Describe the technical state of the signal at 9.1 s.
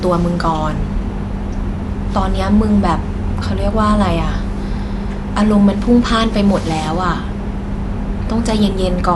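At 9.1 s the speech is dull and band-limited, with nothing above 11.5 kHz. A rough, fluttering noise clings to the tonal parts. This runs through the whole clip. The likely cause is Dolby Digital compression at a low bitrate, which fits about 64 kbps. At that rate the encoder narrows the band and leaves many frequency lines without detail. The decoder fills those gaps with noise, and that causes the roughness.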